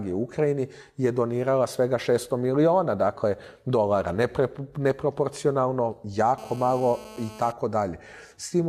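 A GSM phone buzz sits over the sound from 6.38 to 7.52 s: a hard, raspy tone repeating at about 217 Hz, lying roughly 19 dB below the programme and unrelated to it. A nearby 2G handset on a call pulses its transmitter 217 times a second, and the audio circuitry rectifies those bursts. On a spectrogram it shows as a dense comb of harmonics stacked at 217 Hz intervals; the waveform carries a regular pulse train.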